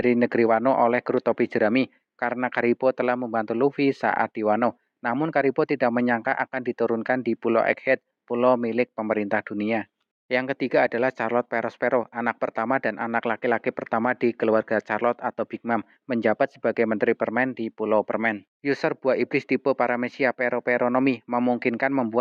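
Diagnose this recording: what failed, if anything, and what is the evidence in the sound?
Nothing failed in this recording. No stage of the chain, from capture through to playback, leaves any audible evidence of a fault.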